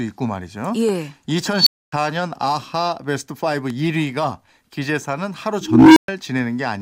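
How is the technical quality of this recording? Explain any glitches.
The recording is marred by two kinds of fault, each occurring twice.

At 0.89 s and 3.70 s a single sharp pop cuts through the speech, the second noticeably harder, peaking at roughly 10 dB above the signal. The speech continues underneath. This is a loud pop, most likely a voltage spike from a plug, switch, static or driver glitch.

From 1.55 to 1.92 s a high squeal at around 4 kHz swells over 114 ms to a clipped blast, then the audio drops out for 260 ms. From 5.61 to 6.08 s the same thing happens with a low tone near 300 Hz, which builds more slowly over 352 ms and is followed by 120 ms of silence. Both are an unstable filter: a recursive filter with bad coefficients feeds its output back until it overflows, then goes silent until it resets.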